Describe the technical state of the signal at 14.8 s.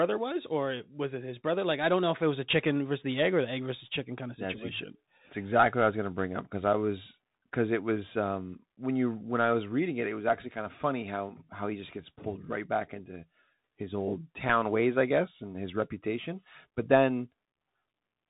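At 14.8 s the speech carries Bluetooth CVSD headset codec damage, present throughout. One-bit adaptive up/down steps at a rate that fits 64 kbps leave s sounds scratchy over granular hiss. A spectrogram shows a hard ceiling near 3.8 kHz.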